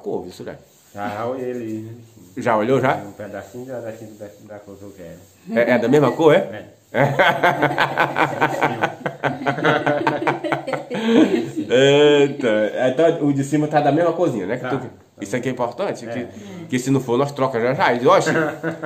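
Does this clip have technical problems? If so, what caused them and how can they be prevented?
No, there are no technical faults to report here, so there is nothing to trace back to a cause or guard against.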